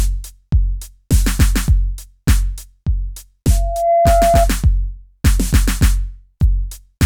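From 3.50 to 4.49 s a loudspeaker feedback squeal rises over the music. A steady 682 Hz tone swells within roughly 0.4 s to about 5 dB above the music, a self-reinforcing loop rather than an external whistle.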